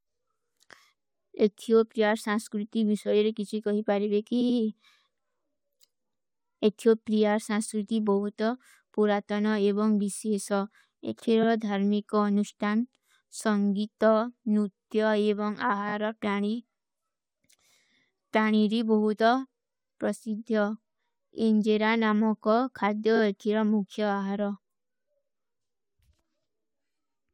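At 4.40 s, just after "ହୈ କୀ", repeated frames make an 85 ms block play twice more, adding 170 ms of stutter. A 43 ms block repeats once at 11.42 s, before "ଧର୍ମୀ କୋ", and 21 ms blocks play twice more at 15.88 s and 23.16 s. The stored stream itself duplicated these spans, fitting 21 ms codec frames. A waveform shows identical copied segments, and a spectrogram shows repeated slices.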